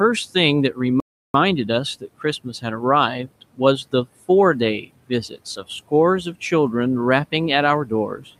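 At 1.00 s the speech just stops dead for about 0.34 s, then picks up again at 1.34 s. That's a playback stall, likely the player running short of data or its thread getting blocked, so nothing reached the output until it caught up.

Later there's speech cut by the noise suppressor, twice. Between 3.27 and 3.60 s, around a tenth of a second of speech drops by about 17 dB. Between 4.81 and 5.11 s, roughly 150 ms drops by about 19 dB. In both spots the suppressor mistook quiet parts of the speech for noise and pulled them down along with the room noise, which sits about 22 dB under the speech. Those bits come across swallowed and faint.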